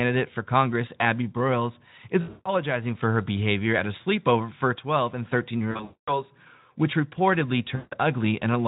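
The speech smears into a buzzy tone or a coloured noise that fades at 2.21 to 2.48 s, just before "for her behavior at"; at 5.71 to 6.22 s, before "which reportedly"; and at 7.75 to 7.97 s, right after "which reportedly". This is VoIP packet loss concealed by the speech codec. The Speex decoder filled about 220, 300 and 160 ms of missing audio by stretching its last pitch and filter with falling gain.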